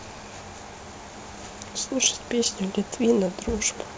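Speech over a call path, band-limited at 8 kHz in a way that fits G.722 at 64 kbps, with room noise about 25 dB below the speech and no faults audible.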